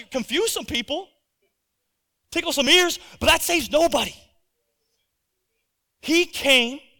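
At 2.67 s, between "tickle some" and "ears but that saves", the speech jumps. A millisecond or two of sound is missing, with no gap. This is likely a dropped buffer (overrun), where samples were overwritten before being read.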